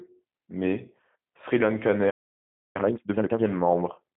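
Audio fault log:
Throughout: G.729 codec. The speech sounds boxed-in and faintly rough, with a synthetic, buzzy edge and nothing at all above 3.5 kHz, so sibilants lose their hiss and the low end thins out below roughly 150 Hz. The damage is plainly audible. The narrowband character and the gritty texture fit an 8 kbit/s G.729A stream, which models each 10 ms frame with a vocal tract filter, a pitch predictor and a handful of pulses.
2.1 to 2.76 s: playback stall. The speech breaks off abruptly in mid-flow and the output falls completely silent for about 0.64 s before picking up again. The sudden cut with no fade, followed by a clean restart, points to the player having nothing to output for that stretch. The likely cause is that its buffer ran dry or its output thread was held up, and the output stayed silent until data flowed again.
2.76 to 3.40 s: time-compressed catch-up. Straight after the gap the speech rushes along at double speed while keeping its normal pitch. 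The player is clearing the backlog built up during the silence by dropping short pieces of the signal and cross-fading the remaining ones together. That keeps the pitch intact but compresses timing.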